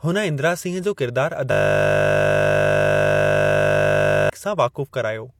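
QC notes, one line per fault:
1.52–4.30 s, system hang loop: the speech freezes into one 20 ms slice of audio replayed exactly, back to back, for nearly 2.8 s, because the system stalled while the sound hardware kept cycling the same ring buffer. A loop that short repeats 50 times a second, so it is heard as a steady 50 Hz buzz rather than a stutter. The waveform shows identical 20 ms cycles, and the spectrogram shows flat, unchanging harmonic lines spaced 50 Hz apart.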